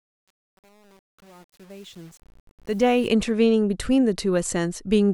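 From the start to 3.08 s, as the speech fades in, the quiet opening sounds gritty and grainy, worst up to 2.84 s. This is truncation distortion on a fade. The fade-in, which rises from near the beginning to full level at 3.08 s, was processed without dither at a coarse resolution that fits an 8-bit stage, so the low-level waveform collapses into a few square steps.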